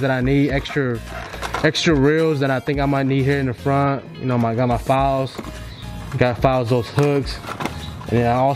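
From start to finish the clip carries computer activity noise, a buzz that rides with no link to the sound itself. Load changes in the computer's processor, graphics card or mouse disturb the ground shared with the audio circuit, injecting pulses at a rate of around 1 kHz, roughly 40 dB below the signal. On a spectrogram this appears as a comb of thin horizontal lines spaced about 1 kHz apart; in the waveform it is buried beneath the signal.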